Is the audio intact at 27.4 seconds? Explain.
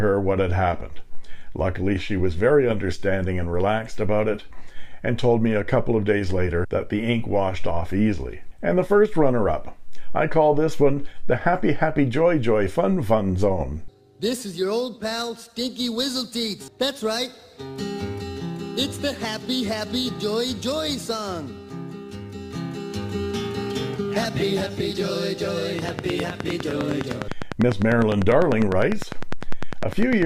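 No. From 25.79 to 30.23 s, a train of clicks, likely from interference, puts about 10 regular pulses per second on top of the sound as ticking, well above it.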